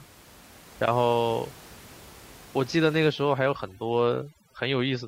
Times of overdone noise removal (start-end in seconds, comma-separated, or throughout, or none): 3.08-5.08